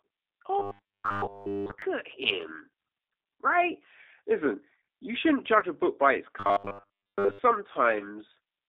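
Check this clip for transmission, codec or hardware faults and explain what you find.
The clip has three kinds of fault: codec damage throughout, two stretches of robotic buzz, and two brief concealed dropouts.

Throughout the 8-second clip the speech sounds thin, slightly rough and synthetic, confined to roughly 300 Hz to 3.7 kHz. That is the G.729 codec at 8 kbit/s, which rebuilds each frame from a vocal tract filter, pitch predictor and a few pulses, and the loss is plainly audible.

From 0.59 to 1.82 s, ending just before "at him", and again from 6.40 to 7.39 s, right after "a book by its", the voice turns into a rigid metallic 100 Hz buzz. This is robotic sound from repeated short buffers, likely caused by audio arriving too slowly so that a 10 ms chunk is replayed while most of the real audio is skipped.

At 5.60 to 5.65 s, between "you shouldn't" and "a book by its", and at 7.98 to 8.03 s, the sound briefly smears into a fading buzzy tone or coloured noise. 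This is VoIP packet loss concealed by the speech codec. About 20 ms went missing each time, which points to a single lost packet, and the decoder extrapolated from its last pitch and filter while lowering the gain.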